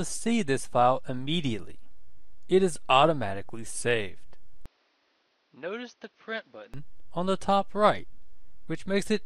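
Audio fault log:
4.66–6.74 s, input likely switched to a poorer device: with no gap at the switch, the sound drops about 10 dB, loses everything above 6.3 kHz and turns dull, with a faint new background noise well beneath it, consistent with a narrower-band microphone taking over before the original input returns.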